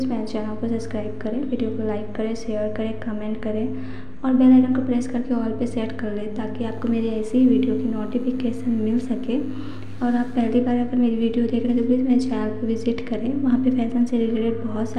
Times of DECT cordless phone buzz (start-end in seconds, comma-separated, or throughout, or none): 6.62-10.49